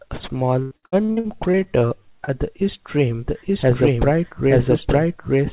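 From 0.62 to 1.68 s there is repeated packet loss, giving a robotic sound. Eleven gaps open in quick succession, the longest 87 ms. Each is patched by stretching the last sound. About 38% of the stretch is filler, so the audio turns choppy.

Overlapping this, from 1.00 to 2.14 s, comes a jitter buffer slow-down. The receiver was rebuilding its reserve by repeating tiny pieces of the waveform. It added 80 ms. The audio runs at 94% speed with unchanged pitch, so sounds drag slightly.

At 2.24 to 2.30 s, just before "the east rim", a short concealed packet loss occurs. About 30 ms never arrived in time. The gap was filled by continuing the preceding sound, leaving a brief smear or wobble.

From 3.26 s, just after "the east rim", a doubled audio track runs to the end. A second full-band copy, about as loud as the first, trails roughly a second behind. It has no room colour and starts abruptly. 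It likely comes from a second, slower capture path.

Throughout, the narrowband sound with nothing above 4 kHz fits a G.711-style call codec.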